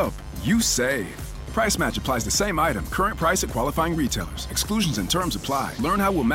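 A steady, raspy mains buzz runs throughout. Switching spikes on the 50 Hz mains put harmonics up to several kHz into the audio, roughly 20 dB below the sound.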